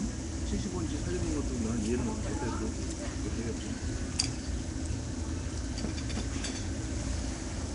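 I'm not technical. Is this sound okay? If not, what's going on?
No. Throughout, the sound is rough, hissy and smeared, with nothing above 10.6 kHz. This likely comes from Nellymoser compression, an old Flash codec that fills weak parts with noise.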